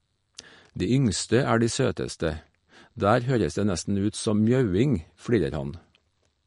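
Throughout, the speech sounds plainly watery and swirly, with nothing above 10.6 kHz. This is likely MP3 compression, pointing to a low bitrate around 45 kbps.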